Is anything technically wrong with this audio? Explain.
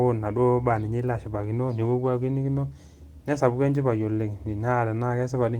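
No, nothing technically wrong can be heard here.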